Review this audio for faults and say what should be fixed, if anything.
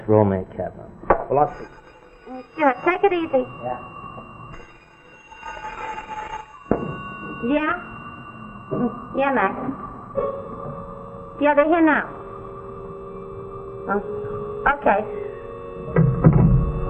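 Nothing needs fixing, as the signal shows no technical faults anywhere in the recording.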